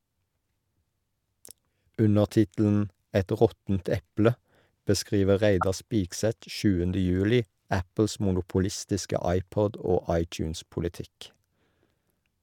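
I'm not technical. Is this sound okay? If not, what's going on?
No. Just after "råttent eple beskriver", from 5.61 to 5.63 s, a brief chirpy burst cuts in. This is a corrupt frame decoded: a few frames of damaged data were played anyway, so it adds a stray noise.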